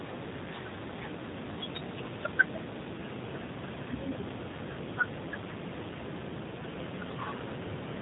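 From start to finish, the speech carries G.729 codec damage. The sound points to G.729A at 8 kbit/s. The codec does not store the waveform. It rebuilds each 10 ms frame from a vocal tract filter, a pitch predictor and a few fixed pulses. So the voice comes out rough and slightly synthetic. The damage is plainly audible. Nothing passes above 3.8 kHz, which leaves the speech muffled and dull.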